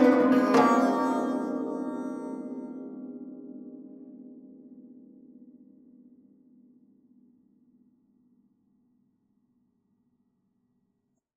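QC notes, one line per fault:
The music signal shows no audible technical faults anywhere in the clip.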